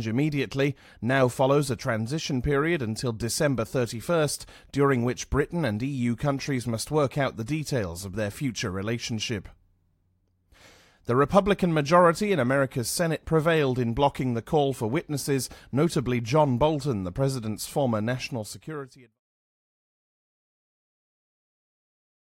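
Nothing in this speech recording points to a technical problem. Near the end, the level eases down in a smooth fade-out that begins around 18 s and is complete by 19.2 s, with no click or hard edge.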